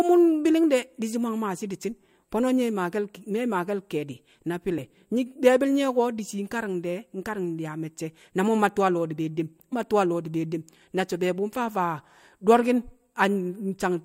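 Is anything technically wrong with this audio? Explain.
Yes, there's one glitch. At about 9.72 s, just before "mma tu̱u̱ a lo̱o̱", the speech has compressed frames skipped: a handful of frames, around four, never got played, likely because they were missing from the file or the decoder rejected them as damaged. The audio jumps forward by roughly a tenth of a second.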